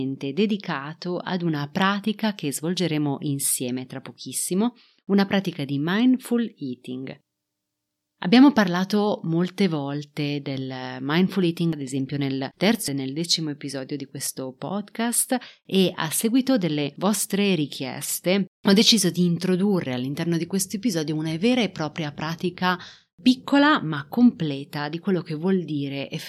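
A recording of speech, and nothing technically wrong turns up anywhere in it, so there's no fault to point to.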